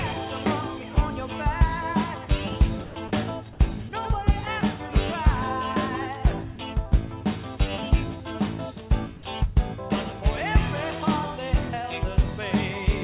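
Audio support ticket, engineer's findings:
Sound dropped by the voice detector, likely the sender's VAD misreading low-level sound as background and pausing transmission, with receiver-side comfort noise filling the gap. Three short dropouts: 2.84–2.96 s (120 ms of filler, about 100 ms of real sound lost), 3.08–3.11 s (30 ms, about 20 ms lost), 3.89–3.92 s (30 ms, all lost). Each heard as sound briefly giving way to flat hiss, resuming when the detector retriggers. Band limit near 4 kHz throughout, consistent with narrowband G.711 A-law.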